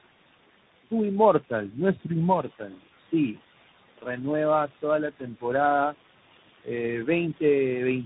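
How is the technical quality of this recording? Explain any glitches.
Two processing faults run through the whole speech recording, while the room noise stays audible about 15 dB below the voice.

Noise suppressor artifacts, throughout: the suppressor pulls steady background down by about 17 dB, so noise drops between phrases, unlike tandem coding's constant roughness.

Tandem speech coding, throughout: the audio was coded and decoded by about three speech codecs in a row, ending with a CVSD-like coder. It sounds rough, muffled and warbly, with nothing above 3.8 kHz, and stays degraded even when noise is absent.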